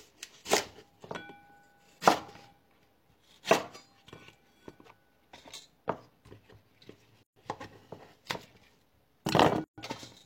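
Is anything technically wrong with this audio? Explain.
Yes. There are two gaps at joins of encoded pieces, from 7.23 to 7.36 s (about 130 ms) and from 9.64 to 9.78 s (about 140 ms). The sound had been encoded in separate pieces. Each piece's start-up delay and end padding were left in, so silence opens in the continuous sound and the sound resumes where it stopped. On a spectrogram or waveform, each gap appears as a blank vertical band with smeared edges.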